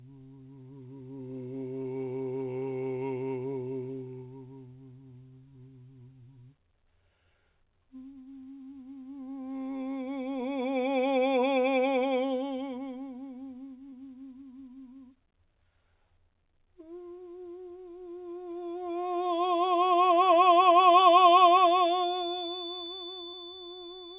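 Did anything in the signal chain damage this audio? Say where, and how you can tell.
Yes. The network stage dropped audio three times, with short concealed packet loss at 1.82 s, 13.90 s and 23.30 s. Each is a brief smear in the music where about 20 ms never arrived. The receiver extended the preceding sound to cover the gap, then crossfaded back to the real signal.

From 20.82 s to the end there is a feedback whistle, a thin, steady 3.5 kHz tone sitting well below the music and swelling and fading slowly in level. It sits just under the 4 kHz limit of the G.711 call path. The likely cause is a loudspeaker-to-microphone loop held at the edge of oscillation.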